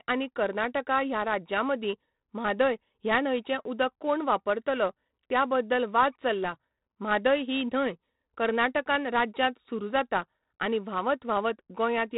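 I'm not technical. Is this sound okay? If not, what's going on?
No. The whole clip has been squeezed with 4-bit ADPCM compression, a heavy, old-fashioned way of shrinking audio. It stores each tiny slice of sound as a rough guess plus a small correction, so it never lands exactly right. That leaves a gritty hiss riding on the speech, strongest when it gets loud. Sharp sounds come out crunchy. Nothing above about 3.8 kHz survives, so the speech also sounds dull and muffled, like an old phone.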